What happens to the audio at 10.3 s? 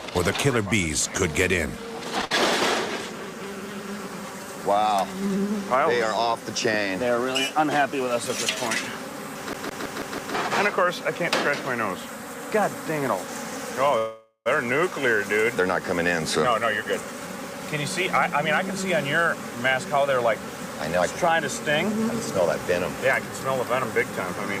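At 10.3 s the audio is finishing a rapid, even stutter: the same fragment of about 163 ms has been playing over and over, five times, with a brief mute at each jump, from 9.53 s until it releases at 10.35 s. This is a CD stuck on one turn. A scratch sends the laser back one track at the same point on every rotation, so that short slice of sound repeats until the player breaks free.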